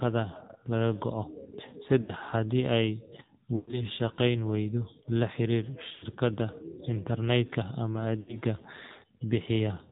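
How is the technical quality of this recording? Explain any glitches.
The quality is poor: the speech has clearly been through a phone network, with four short dropouts.

Throughout, the AMR narrowband mobile codec cuts everything above 4 kHz, and its pulse-driven vocal-tract model leaves the voice buzzy and synthetic, which fits a low mode around 7.4 kbps.

Lost AMR speech frames occur at 2.02–2.12, 3.56–3.85, 5.92–6.05 and 8.20–8.37 s. The decoder stretches the last good sound and fades it out. Each gap is a smeared, dipping warble lasting about 60–120 ms, and the voice returns rough.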